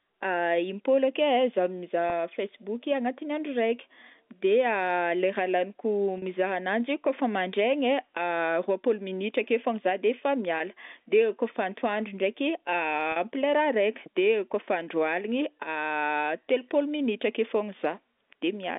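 At 2.10 s, 6.18 s, 10.58 s and 13.12 s the speech shows packet loss with pitch repetition. Gaps of 20, 40, 20 and 40 ms, consistent with one or two lost packets each, are bridged by repeating the last pitch period. The shorter gaps sound like a brief held, slightly buzzy sustain. The 40 ms gaps stretch the held tone audibly longer before normal speech resumes, all within the narrow 200 Hz to 3.6 kHz telephone band.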